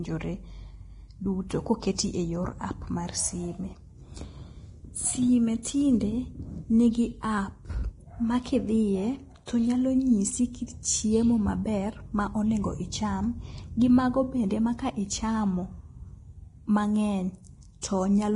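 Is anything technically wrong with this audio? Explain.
Yes. Throughout, the speech is hissy and grainy, with roughened tones, and nothing is present above 10.6 kHz. This is likely heavy Vorbis compression, at a low bitrate that fits about 30 kbps. Coarse quantisation of the treble turns fine detail into noise of similar energy. On a spectrogram, the upper band looks speckled and ends at a hard horizontal ceiling.

Pre-echo occurs at 1.49 s, at 9.46 s just before "to nyalo nyisi kit", and at 17.81 s. Each time, a short hiss of about 13 to 17 ms comes before a sharp attack, because quantisation noise sized for the loud part spreads back through its block. The waveform shows a fuzzy smear leading into each onset.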